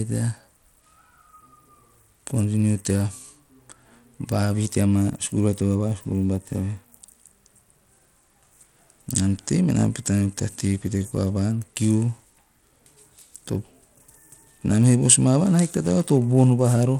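Throughout the speech, coarse, grainy coding damage is plainly audible. The likely cause is Bluetooth SBC compression, at a low setting that fits roughly 96 kbps.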